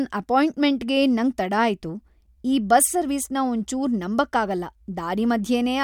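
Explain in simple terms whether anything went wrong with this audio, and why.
Nothing went wrong: the speech is heard without any audible fault at any point in the recording.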